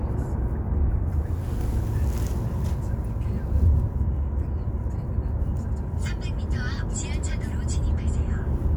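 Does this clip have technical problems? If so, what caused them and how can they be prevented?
No, nothing in this sound stood out as a technical problem on listening, so there is nothing here that needs preventing.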